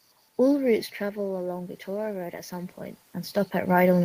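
From 0.67 s to the end, automatic gain rising: the input dropped by about 10 dB, and the gain control answered by gradually turning itself up, so the voice and the room noise swell together over several seconds rather than recovering at once.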